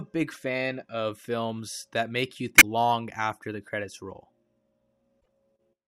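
Damaged data in a compressed stream causes brief glitches at 0.32–0.37 s (before "of films that make"), 2.58–2.63 s (between "films that make you" and "long after the credits") and 5.17–5.28 s. Corrupted bytes make the decoder misread frames and lose sync until it finds the next frame header.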